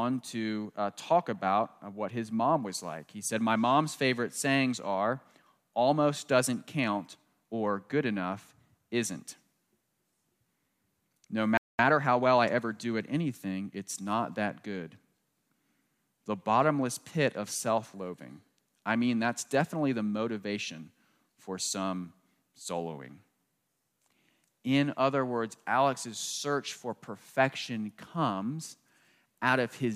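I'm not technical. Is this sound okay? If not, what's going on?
No. At 11.57 s there is a playback stall: the speech cuts to silence for about 0.22 s, likely because the player briefly ran out of data. From 11.79 to 12.65 s comes time-compressed catch-up: the speech plays about 1.25 times faster at normal pitch while the player makes up the lost time.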